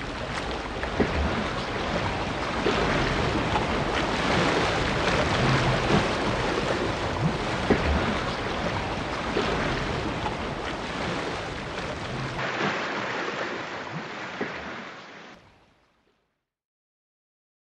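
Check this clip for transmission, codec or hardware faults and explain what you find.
There's one fault: from 12.39 s to 15.35 s the sound abruptly goes narrower and duller, then opens back up. That pattern points to the input likely being switched to a poorer device, a different mic or a headset profile with a tighter passband. Nothing comes through above 7.6 kHz during that stretch, the level shifts by roughly 5 dB, and a new noise floor appears about 30 dB down. There's no gap at either switch.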